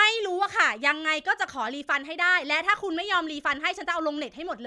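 No technical faults are audible anywhere in the recording.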